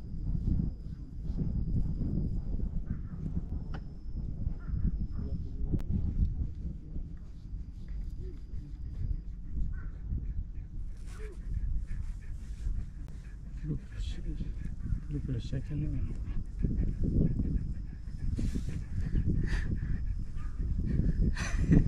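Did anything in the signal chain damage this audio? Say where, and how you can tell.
Yes. There are three blocks of digital silence at the driver or buffer stage, at 3.49 s, 5.79 s and 13.07 s, lasting 5.65, 11.61 and 16.15 ms. Each is heard as a tick or brief hole, because the signal drops straight to zero and back without any fade. The 11.61 ms gap fits a 512-sample buffer that wasn't filled in time. A waveform shows dead-flat segments, and a spectrogram shows thin empty columns.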